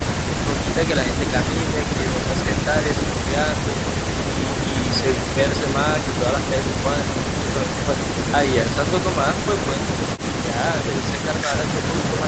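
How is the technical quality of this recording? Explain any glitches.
No glitches at all; the recording has no faults.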